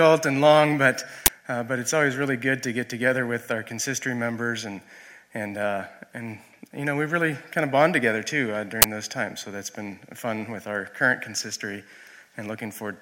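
Two bursts of uninitialised buffer noise cut through the audio, at 1.26 to 1.28 s and 8.82 to 8.84 s. Each time, a 20 ms block was played before any audio had been written into it, so leftover memory came out as a harsh blast of digital noise. On the waveform, each appears as a dense, loud block with abrupt edges. On the spectrogram, it shows as a bright vertical band spanning the frequency range.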